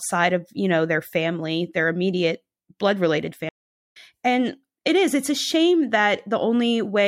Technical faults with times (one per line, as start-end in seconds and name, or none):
3.49-3.97 stream reconnect